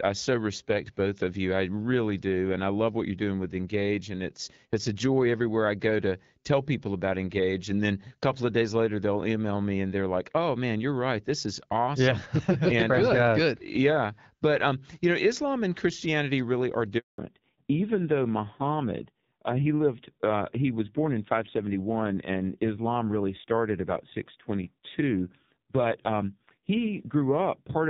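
A speech recording carried over a mobile call, opening on HD Voice with light codec damage; its clean wideband character fits AMR-WB at around 12.65 kbit/s. At 16.98 s a handover gap occurs: the sound dies away within a few tens of milliseconds and stays silent for 200 ms, until 17.18 s. This is the call being moved between networks, with no speech frames delivered during the switch, so whatever was said in that interval is lost rather than delayed. From 17.18 s to the end there is a fallback to narrowband. Everything above 4 kHz disappears, and the speech turns dull and rougher. The link has dropped from the wideband codec to an older narrowband one, and the rougher texture points to AMR-NB at about 5.9 kbit/s.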